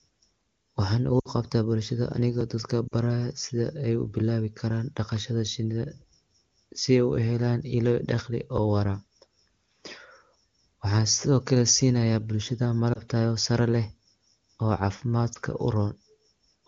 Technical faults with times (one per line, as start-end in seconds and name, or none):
1.19-1.28 lost AMR speech frames
2.41 dropped buffer (overrun)
2.87-2.94 lost AMR speech frames
8.57 dropped buffer (overrun)
12.93-13.01 lost AMR speech frames
15.33-15.38 lost AMR speech frames